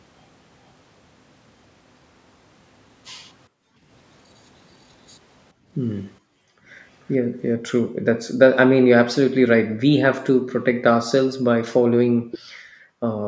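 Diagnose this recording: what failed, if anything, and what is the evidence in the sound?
The failure is in call processing: background gated by the echo canceller. The room sound behind the speech drops by as much as about 40 dB in four windows, at 3.49–3.84 s, 5.53–8.38 s, 9.67–10.48 s and 12.11 s to the end. Within the longer windows only about a second is actually gated. On a spectrogram the noise floor turns to dark, nearly empty bands, and the waveform's low-level hiss flattens to near silence. The canceller is clamping the microphone while the far end plays.

A delayed double of the speech appears briefly at 7.10–7.14 s and again at 12.31–12.39 s. It trails the original by about 439 ms and 451 ms. The first instance is very quiet, roughly 35 dB down, and the second is much stronger, roughly 15 dB below the speech. The likely cause is echo leak: loudspeaker sound that the canceller failed to subtract was sent back. 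On a spectrogram this shows as a ghost copy of the harmonic pattern shifted about 0.45 s later, with the band-limited call path stopping at 8 kHz.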